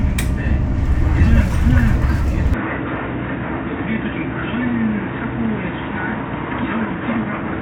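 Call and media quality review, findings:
Input switched to a poorer device at 2.54 s, persisting to end. Sound turns abruptly dull and boxy. Nothing above 3.8 kHz after the change. Level drops by about 10 dB. New background noise appears, roughly 40 dB below the signal. No gap at the switch. Probable component: capture path, likely a hand-off to a lower-grade microphone or a headset call profile. Narrower passband and different noise floor explain the change.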